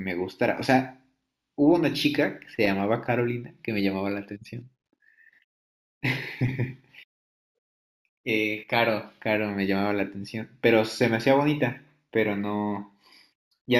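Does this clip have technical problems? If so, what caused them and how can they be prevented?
Yes. Imaging from linear upsampling is present throughout. The treble is dulled, and faint mirror images at 8 to 16 kHz, roughly 35 dB down, add shimmer to sibilants. This points to 16 kHz audio upsampled to 44.1 kHz by straight-line interpolation. Prevent it by upsampling with a steep windowed-sinc or polyphase anti-imaging filter.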